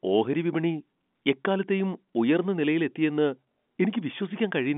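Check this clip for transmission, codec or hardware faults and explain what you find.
Nothing stood out on listening to this telephone-band speech clip.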